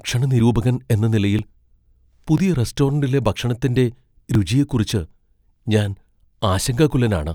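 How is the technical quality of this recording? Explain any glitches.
The recording has a recurring glitch: audio missing between chunks, as tiny skips at 0.40, 1.39, 2.38, 3.36, 4.35 and 6.33 s, about once a second. Each drops roughly a hundredth of a second of speech, likely lost while the recorder closed one one-second chunk and opened the next, so the speech jumps slightly.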